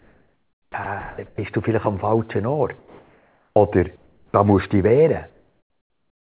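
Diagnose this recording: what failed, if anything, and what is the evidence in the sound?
Sound chopped by the voice detector, call processing: from 0.0 to 1.38 s, before "du vielleicht am falschen", speech repeatedly drops out into fill, likely from the detector toggling transmission, unlike one steady gap.

Comfort noise in place of the background, call processing: at 2.78 to 3.56 s after "du vielleicht am falschen", 3.96 to 4.34 s, and 5.3 s to the end after "musst du dich wehren", real ambience becomes featureless hiss, about 2, 4 and 6 dB quieter. This is likely discontinuous transmission with synthetic fill, not a dropout to silence.

Onset clipped by the voice detector, call processing: at 3.54 s the speech starts abruptly, its first 20 ms replaced by noise, likely from slow speech detection rather than an edit.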